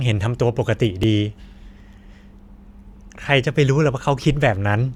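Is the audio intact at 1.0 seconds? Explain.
No. At 1.03 s there is an overlap between stream segments. The player trims about 15 ms of speech twice-timed but never doubled, so the waveform jumps, heard as a tiny skip.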